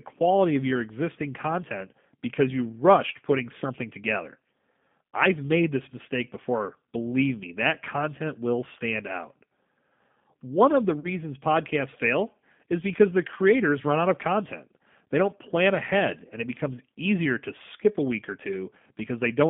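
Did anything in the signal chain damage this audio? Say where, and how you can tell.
Yes. The damage starts at the codec stage, a G.729 codec at 8 kbit/s. The whole clip sits in a narrow line band of about 150 Hz to 3.6 kHz. The speech sounds plainly rough and synthetic. The decoder rebuilds it from a vocal tract filter, a pitch predictor and a few pulses per frame.

The network stage adds VoIP packet loss concealed by the speech codec, from 11.00 to 11.07 s. About 40 ms of audio is missing, which fits two lost packets. The decoder stretches its last pitch and filter into a fading buzzy tone or coloured noise. The speech stays weak briefly afterwards.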